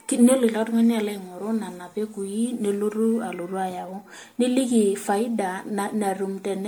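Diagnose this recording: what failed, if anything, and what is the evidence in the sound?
Throughout the speech, the sound is swirly and hollow, with a watery smear and consonant onsets that have lost their edge. Yet content still extends to about 19.9 kHz. This points to generation loss at the codec stage, most likely from MP3 encoding repeated roughly ten times at a rate consistent with 96 kbit/s. Each decode and re-encode falls on a shifted frame grid, so fresh quantisation noise and spectral holes pile up.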